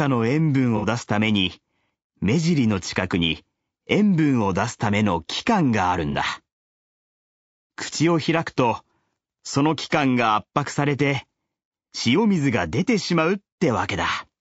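Speech with plainly audible low-delay AAC compression throughout: rough, grainy voicing with noise between harmonics and a thin synthetic top, likely AAC-ELD at about 32 kbps, unlike ordinary AAC's pre-echo smearing. AAC frame loss with concealment hits at 0.77–0.85 s and 6.11–6.16 s, brief smeared, phasey patches consistent with two lost frames and then one, filled in rather than dropping to silence as a dropout would.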